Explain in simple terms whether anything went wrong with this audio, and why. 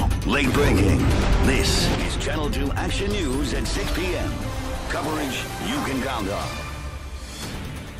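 One channel drops out at 1.95 s and stays gone to the end of the clip. At that moment the sound abruptly becomes noticeably quieter, as if someone turned it down by a clear step, and it never recovers. The likely cause is that one side of the stereo recording was lost. When both sides are blended into a single track, the shared sound loses half its strength, and anything that was only on the missing side vanishes completely.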